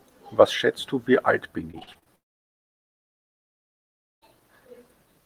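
A speech clip whose network delivery failed twice. From 1.71 to 2.08 s, repeated packet loss (robotic sound) sets in: packets went missing or arrived late in quick succession, around half a dozen short holes, none longer than about 40 ms. Each hole was patched by extending the preceding sound, so close to 40% of that stretch is reconstructed rather than real, and the speech turns choppy with fragments dropped. Right after, from 2.16 to 4.23 s, comes what is likely a long network dropout, with nothing arriving for roughly two seconds. The receiver first carries the last sound forward as a fading buzz or hiss, then settles into near silence for almost all of the span, and when the speech resumes at 4.23 s the missing two seconds are simply gone rather than delayed.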